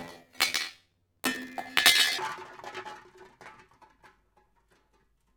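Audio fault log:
0.00–2.20 s, planar audio read as interleaved: the sound jumps an octave (12 semitones) higher and carries a flutter at 43.1 Hz, yet its overall pace stays correct. Each 23.22 ms block, which fits a 1024-sample block, stores all left samples and then all right samples, but the player treats them as alternating pairs. Each block's left half and then its right half play at double speed, so the block repeats at 43.1 Hz.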